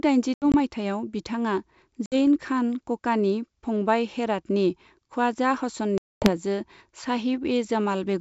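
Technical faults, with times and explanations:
0.34–0.55 s, 2.06–2.15 s, 5.98–6.32 s: packet loss on an ADPCM call. About 100 ms, 60 ms and 240 ms drop to hard-edged silence. The first is scattered, with runs up to 80 ms. Each return is slightly distorted because the decoder's predictor and step size lost sync with the sender's. The wideband G.722 sound sits above this, consistent with 64 kbit/s.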